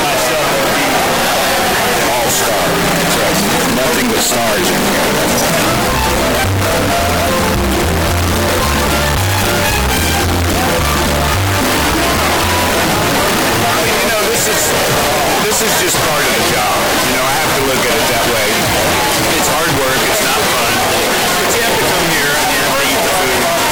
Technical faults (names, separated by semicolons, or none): float read as integer